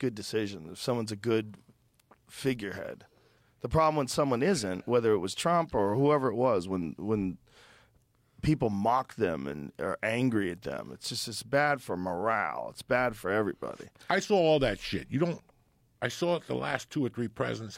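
No technical faults are audible anywhere in the recording.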